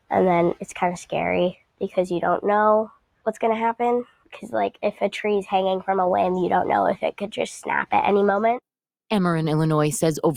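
Across the whole clip the level pumps gently by a few decibels, held sounds sinking while attacks get through. A speech-tuned noise suppressor applied to music or sounds is treating steady content as noise. At 1.53 to 1.89 s, 2.89 to 3.26 s, 4.05 to 4.36 s and 4.72 to 5.01 s, the sound drops away by about 19, 19, 16 and 18 dB. This is sound cut by the noise suppressor, mistaking those passages for noise.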